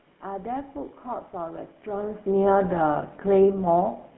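The whole recording has passed through the GSM full-rate codec. The speech sounds buzzy and gravelly. The codec rebuilds the voice from a vocal tract model driven by regularly spaced pulses, keeping only a thinned-out excitation. That coarse excitation causes the roughness. The damage is plainly audible. The band runs from about 150 Hz to 3.4 kHz, with nothing higher getting through. This character fits the 13 kbps rate of that codec.

From 2.99 to 3.03 s there are GSM bit errors. Corrupted bits reached the decoder on a weak link. Its filter, pitch or gain values went wrong for a moment. The result is a short squawk and gargling break in the speech. It lasts about 40 ms, which fits two damaged frames. It comes shortly after the voice level shifts around 2 s, as the talker moves relative to the microphone.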